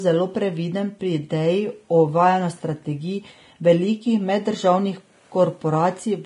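Speech that carries low-bitrate audio saved at a high bitrate throughout. Nothing sounds above 10.6 kHz, so a spectrogram shows a flat ceiling there for the full length, with the artefacts of the earlier encoding still present below it. The likely cause is that an earlier encode near 29 kbit/s, probably Vorbis, removed the top band and fine detail, and a later 256 kbit/s MP3 encode kept that damage without restoring anything.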